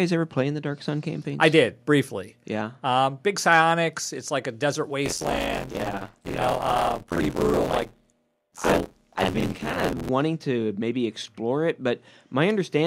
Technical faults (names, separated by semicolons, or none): microphone volume stepped down; microphone overload; buffer tearing